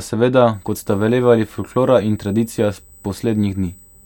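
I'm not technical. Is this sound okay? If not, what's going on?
No. From about 0.54 s to the end, a thin, high-pitched whine sits under the speech. This is USB whine: a USB connection draws power in rapid, regular bursts, 8,000 per second here, and that electrical pulsing leaks into the audio through the power or ground wiring. It comes through as a steady tone at 8 kHz, loudest at 16 kHz. It is fairly quiet compared with the speech, but it never stops.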